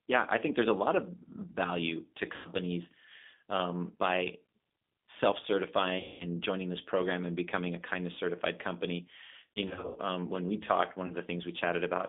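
The whole clip runs through a G.729 codec. The band is squeezed to about 200 Hz to 3.6 kHz, and the speech sounds rough and synthetic. VoIP packet loss concealed by the speech codec follows. At 2.36 s, after "lot of value to", the sound stretches out and fades. At 5.99 s a longer gap stretches out. From 9.53 to 10.0 s, after "a kindness certified company" and before "um when we talked", scattered dropouts break up the voice. At 11.07 s, after "when we talked one", a brief blip fits one lost packet.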